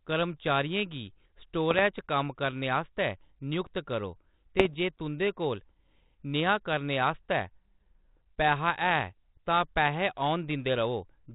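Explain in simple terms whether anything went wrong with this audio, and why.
Bit errors on an ADPCM link at 1.71–1.82 s and 4.59–4.75 s: a few flipped bits throw the decoder off briefly, causing pops and rough bursts that linger.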